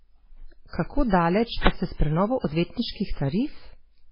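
Throughout the speech, the likely cause is MP3 compression starved of bits, which fits a bitrate near 16 kbps. The encoder has discarded everything above 5.3 kHz and left weak frequency lines flickering between frames, so the sound is dull, watery and swirly, with smeared attacks.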